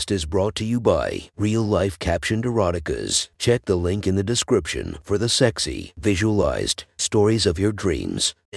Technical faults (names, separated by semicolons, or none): none